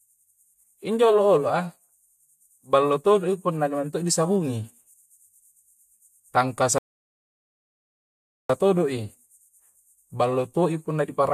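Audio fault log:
6.78 to 8.50 s, rebuffering stall: the speech drops to silence for about 1.7 s, then picks up exactly where it left off. The player exhausted its downloaded audio and waited for more, so nothing is skipped, but the pause adds that time to playback.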